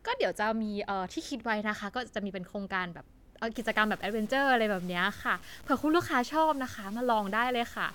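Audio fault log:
3.55–7.94 s, low bit depth without dither: from 3.55 s to the end, the speech takes on a grainy, gritty edge that moves with the voice rather than sitting underneath as steady hiss. That's the signature of very coarse quantisation, likely 7-bit truncation with no dither, so the rounding error locks onto the waveform and turns into distortion instead of noise. The error sits only about 25 dB below the speech.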